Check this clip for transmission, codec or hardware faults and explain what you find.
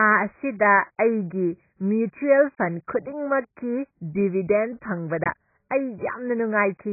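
There's one fault, and it runs the whole way through: heavy AAC compression. The speech has nothing above 2.5 kHz, with a dull, smeared quality and a warbly, fizzy edge on sibilants. That's likely AAC-LC at a very low bitrate, something like 12 kbps, where the encoder drops the top of the spectrum and quantises what's left so coarsely that bands thin out or fill with substitute noise.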